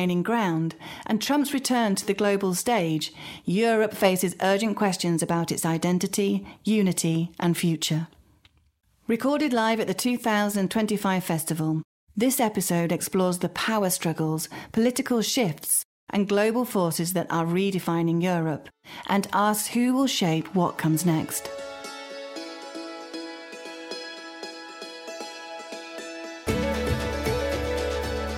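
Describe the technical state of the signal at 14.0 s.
At 14.0 s the signal is intact, with no audible technical fault at that moment.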